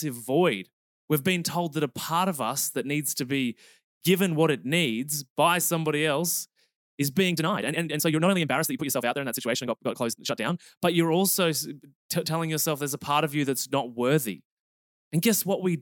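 From 7.27 to 10.67 s, just after "by somebody else is", the speech turns rushed, running about 1.81 times faster at unchanged pitch until "but you're also". This time-stretched section likely comes from software squeezing audio by dropping short pieces.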